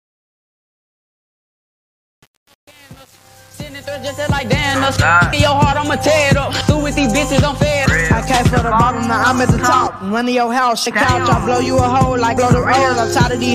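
From 0.0 to 4.67 s, the fade-in suffers truncation distortion. The gain stage keeps too few bits, consistent with about 7, and applies no dither. Through 4.61 s the quiet rising level sounds gritty and stepped, even though the fade's shape is smooth.

Compressed frames skipped appear at 5.33, 6.61, 7.86, 10.86 and 12.37 s. Each time, whole compressed frames are left out, consistent with 32 ms frames. The audio jumps ahead by roughly 300, 300, 200, half a second and 200 ms.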